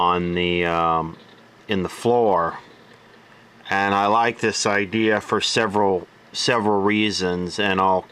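No technical faults can be heard anywhere in this audio.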